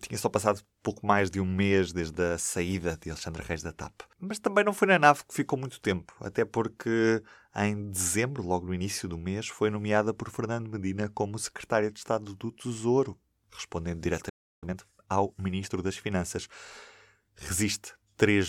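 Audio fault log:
14.29–14.64 s, playback stall: the speech cuts to silence mid-flow for about 330 ms, then picks up where it stopped, with nothing missing. The likely cause is the player running short of buffered data or its output thread being held up. Unlike a dropout, where a packet is lost and the sound jumps ahead, the silence here is added time. No content is skipped, so the clip runs late afterwards.
14.64–15.94 s, time-compressed catch-up: straight after the stall, the speech runs hurried at about 1.25 times normal speed for 1.3 s to close the delay. The player does this by removing short slices of audio and cross-fading across the joins. Pitch stays where it was, which separates this from a faster sample rate or a sped-up tape effect, where the voice would rise.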